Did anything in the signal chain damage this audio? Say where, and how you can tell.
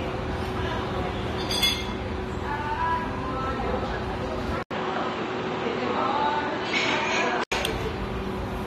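Yes. AAC compression affects the whole clip at the codec stage. Nothing sits above 15.1 kHz, and codec damage is plainly audible as a dull, smeared, fizzy texture. That points to AAC-LC at about 32 kbps, likely because the coder trims bandwidth and coarsely quantises its frequency lines to fit.

An input switched to a poorer device at the driver stage from 4.63 to 7.52 s. An 80 ms silence marks the switch, then everything above 8 kHz vanishes and a faint new noise floor appears, well below the signal, while loudness stays unchanged. This likely means capture moved to a narrower-band microphone or headset profile.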